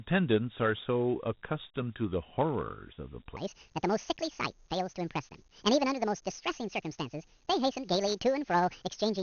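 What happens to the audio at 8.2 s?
At 8.2 s the audio is inside a section at the wrong speed, running from 3.37 s to the end of the clip. It plays about 1.73 times too fast, likely from being fitted to the wrong clock, so the speech sounds hurried and raised by roughly ten semitones. Tempo and pitch jump together, unlike a pitch-shift that leaves timing intact. The Dialogic VOX ADPCM coding also continues here. Nothing sounds above 4 kHz, and a gritty, plainly audible hiss trails the speech. The 32 kbps rate fits 4-bit samples at 8,000 per second. That grain, rather than a clean narrow band, separates it from simple low-rate resampling.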